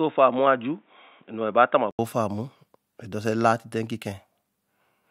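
From the start to about 1.99 s the speech sounds dull and boxy, with nothing above 3.8 kHz and a faint new noise floor well below it. It then opens up after an 80 ms gap at about the same level. That's most likely the input switched to a poorer device.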